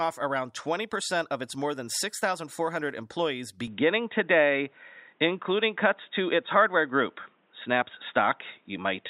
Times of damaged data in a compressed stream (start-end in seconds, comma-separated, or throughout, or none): none